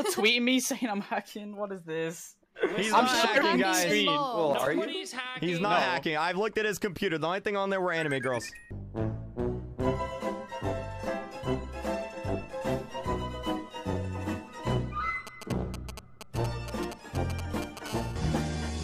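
A nearby 2G handset whose radio bursts were being rectified by the audio circuitry produced GSM signalling bursts from 15.27 to 17.88 s. While the phone was only signalling, its transmissions came in short groups, heard as a galloping dit-dit-dit of brief 217 Hz buzzes, roughly 10 dB below the wanted sound. From 17.88 to 18.79 s the phone settled into call transmission, pulsing steadily at 217 bursts per second. The result is continuous GSM phone buzz, a hard, raspy 217 Hz tone rich in harmonics and unrelated to the audio, sitting about 19 dB below it.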